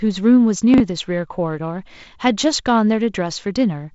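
At 0.74 to 0.80 s the speech has chunks out of order: a 20 ms slice of audio arrived late and plays two chunks after where it belongs, so the three slices in that span come out shuffled. Nothing goes missing, but the sound briefly jumbles across the three hard joins. On a waveform, the joins show as abrupt steps where the wave doesn't line up. On a spectrogram, they are thin vertical broadband lines within that 60 ms span, with formant tracks jumping discontinuously between them. The wideband telephone coding underneath leaves the spectrogram empty above about 7.7 kHz, with a faint hiss in the upper band, and the 48 kbit/s rate leaves the lower band a little noisier.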